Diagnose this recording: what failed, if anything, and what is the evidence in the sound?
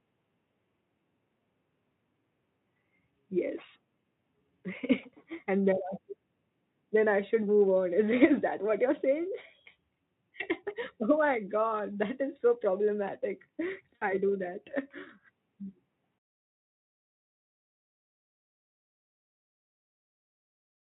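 The failure is in the network stage: VoIP packet loss concealed by the speech codec. From 13.96 to 14.12 s the speech is stretched into a buzzy tone or a coloured noise that fades. About 60 ms of audio is missing, which fits three lost 20 ms frames. The Speex decoder filled the gap by repeating its last pitch and filter with falling gain. Each frame builds on the one before, so the voice stays weak or distorted until about 14.12 s, after the packets resume.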